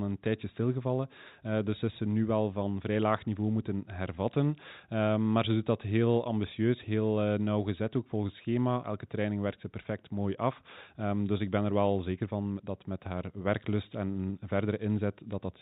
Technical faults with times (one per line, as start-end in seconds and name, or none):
none